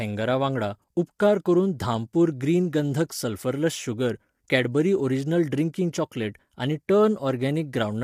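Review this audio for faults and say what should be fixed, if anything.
The speech sounds rough and grainy throughout, with noise filling the gaps between harmonics and a thin, artificial top band. This is likely low-delay AAC compression such as AAC-ELD. Its short frames resolve pitch poorly, and the damage fits a rate near 32 kbps. Prevent it by encoding at a higher bitrate.

Pre-echo appears at 1.19 s, just before "करून धामपूर ग्रीन गंधक". A brief hiss of about 14 ms leads into the attack, which sounds smeared. The codec spread its block noise into the quiet moment before the onset. Prevent it with shorter transform blocks on transients or more bits.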